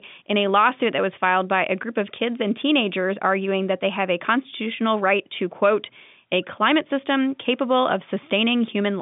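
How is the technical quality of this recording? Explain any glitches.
The speech carries no glitches: it sits in a telephone band of roughly 150 Hz to 3.6 kHz, consistent with G.711 telephone coding at 64 kbps, most likely the A-law variant, and any coding damage is faint at most.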